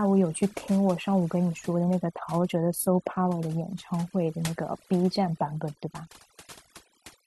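Across the whole speech recording the background drops to an unnatural hush dotted with tiny chirping specks. That is overdone noise removal: a denoiser set too aggressively is gating away frequency bands near its noise estimate, stripping softer vocal detail along with the noise.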